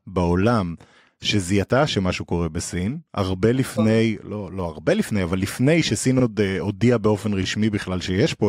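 A short speech recording with two small repeated-frames stutters. At 6.19 to 6.23 s a block of about 43 ms plays twice, which fits two compressed frames being written or sent again. At 7.42 to 7.44 s a roughly 21 ms block repeats once, which points to a single duplicated frame. The decoder plays the same slice back each time, so the audio briefly hiccups and gets about 64 ms longer overall.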